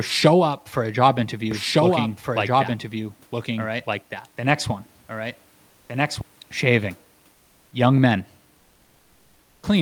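A speech recording in which, from 1.51 s to 6.21 s, just after "up for a job", a doubled audio track runs underneath: a second full-band copy trails by roughly one and a half seconds at about 5 dB below the original, then cuts in and out abruptly. Unlike an acoustic echo or reverberation, the copy has no decay and no room colouring, and it stays at one fixed lag. The likely cause is the same signal being captured again over a slower path. Separately, comfort noise takes the place of the background for 200 ms at 5.69 to 5.89 s and for 400 ms at 7.31 to 7.71 s. In both spans the detailed room noise gives way to a smooth, featureless hiss that is about 4 dB and then about 3 dB quieter. A noise gate would drop these gaps to near silence instead. Here the pauses are filled with synthetic noise, which likely comes from the codec's discontinuous transmission switching off between phrases.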